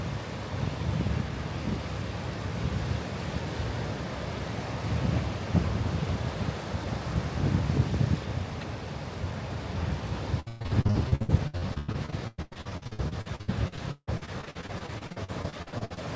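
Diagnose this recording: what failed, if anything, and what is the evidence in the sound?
From 10.40 s to 15.99 s the sound turns choppy, with a stuttering quality as fragments drop out and get smeared over. This is repeated packet loss at the network stage: over fifty separate gaps in that stretch, the longest about 161 ms, each patched by extending the last received audio. Roughly 39% of the span is concealed rather than real, and the G.722 path's 8 kHz ceiling stays audible throughout.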